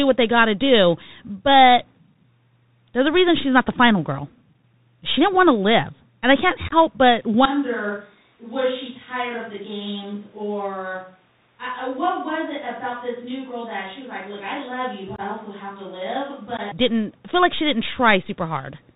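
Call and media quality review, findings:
Bluetooth CVSD headset codec, throughout: band-limited, nothing above 4 kHz; scratchy s sounds, grit on loud bright syllables where the adaptive one-bit step can't keep up, granular hiss under the speech. The hiss and slope-overload grit, rather than metallic warble, distinguish CVSD.

Unconcealed Bluetooth headset packet loss, 6.68–6.73 s: about 30 ms of holes scattered over 38 ms, longest about 19 ms; hard-edged gaps. Unlike concealed loss, nothing is filled in, and speech returns briefly quieter, typical of CVSD step reset.

Same fault at 15.16–15.20 s, about 23 ms missing, and at 16.57–16.60 s, 15 ms missing; abrupt silent holes, not smooth fades or repeats.

Switch to a distant microphone, 7.46–16.72 s: sudden roomy, hollow tone, thinner bass, level about 10 dB down, room noise roughly 35 dB below speech. Likely the close mic dropped out and the fallback took over. 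Abrupt change at both ends plus room colour separates this from a plain gain drop.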